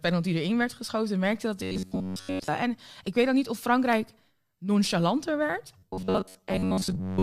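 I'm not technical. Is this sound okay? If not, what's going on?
No. From 1.63 to 2.48 s, and again from 5.78 s to the end, the speech turns into a stiff, metallic buzz at about 94 Hz: robotic sound from repeated short buffers. It's likely from audio arriving late, so tiny snippets get repeated to fill most of those gaps.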